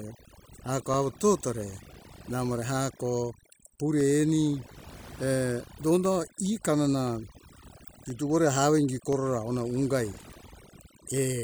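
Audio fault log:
Throughout: overdone noise removal. The denoiser was pushed too hard, so any frequency band sitting near its noise estimate gets pulled right down, taking the quieter parts of the speech with it. The background is near silent apart from twinkling specks.
0.94 to 11.18 s: periodic USB or driver dropouts. Roughly every 1.02 s, about ten times, around a millisecond of audio drops out to silence, likely from something stalling the USB bus or audio driver on a fixed cycle. Each gap lands as a small regular tick under the speech.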